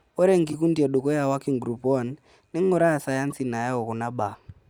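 At 0.47 to 0.54 s, a corrupt frame decoded event puts a short burst of misplaced energy into the speech: damaged compressed data was played back anyway, so wrong gains scatter the sound across the spectrum for a few frames, peaking around -20 dBFS. A second, shorter blip at 3.30 to 3.32 s spans a couple of frames near -25 dBFS. Each shows as a blocky vertical patch on a spectrogram and a brief jagged spike in the waveform.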